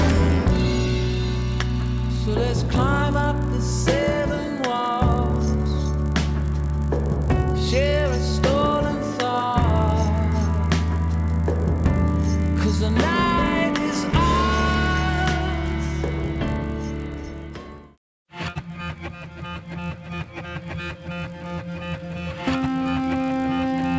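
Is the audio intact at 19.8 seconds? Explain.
No, at 19.8 s the resampler is restarted on every block, as it is throughout. Each 20 ms block is converted from 48 kHz to 16 kHz on its own, so every edge carries a small error, giving a 50 Hz buzz under the sound.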